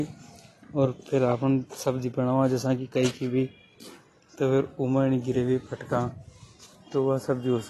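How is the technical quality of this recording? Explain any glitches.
The recording has plainly audible codec damage from start to finish. The speech sounds dull and smeared, with nothing above 12 kHz and a warbly, fizzy edge on sibilants. The likely cause is AAC compression at a low bitrate, around 32 kbps. The encoder drops the top band and coarsely quantises the rest, leaving spectral holes or filling bands with substitute noise.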